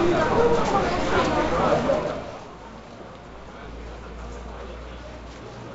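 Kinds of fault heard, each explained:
No audible faults were heard anywhere in this audio.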